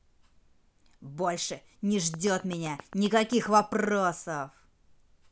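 From 2.14 to 3.87 s a train of clicks runs over the speech: around fifteen near-identical pulses at a steady 7.6 per second, heard as an even ticking that carries through pauses as well. The peaks stand roughly 5 dB above the speech. The waveform shows thin, evenly spaced spikes. The spectrogram shows matching vertical lines spanning the full frequency range. Interference from nearby equipment or a faulty connection is the likely source.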